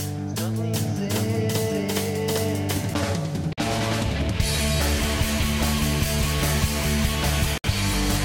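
From 0.74 s to 2.94 s the music carries a doubled audio track: a second, full-band copy runs roughly seven-tenths of a second behind at about the same loudness, so phrases overlap themselves. Unlike an echo or room reverb, the copy neither decays nor takes on any room colour, and it appears and vanishes abruptly. A slower second capture path or two out-of-step copies held in an edit is the likely cause.

At 3.53–3.58 s (47 ms) and 7.58–7.64 s (64 ms) the music drops into silence and then resumes exactly where it stopped. These are gaps at a join of encoded pieces. Each piece was encoded separately, and the encoder's start-up delay and final-frame padding were left in when the pieces were joined. A packet dropout would lose material, but here none is lost, and the regular 4 s spacing marks the piece boundaries. The edges are softened by codec smearing.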